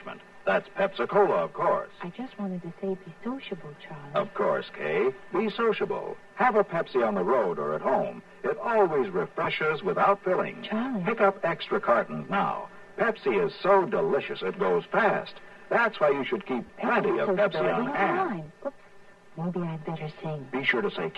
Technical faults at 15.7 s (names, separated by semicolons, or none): channel delay (comb filtering)